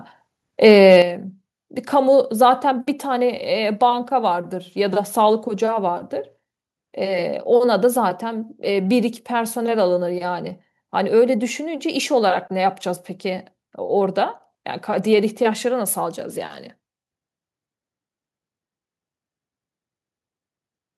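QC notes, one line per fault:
0.92–0.97 s, microphone overload: a loud syllable turns harsh and crackly for about 50 ms, with a gritty edge on its peak instead of a clean rise and fall. The input level was likely set too high, so the loudest part went about 2 dB past what the converter can represent. A small share of the samples were flattened at the converter's limit, and those squared-off tops add the buzzy distortion.
1.02 s, microphone volume stepped down: just after the distorted peak, the level falls abruptly by about 8 dB. The voice and the background noise drop together in one step, with no gradual fade. The call software likely detected the overload and cut the device's input volume in a single move. Because the whole signal is scaled down at once, the room sound shrinks along with the speech, and everything after this point sounds noticeably quieter.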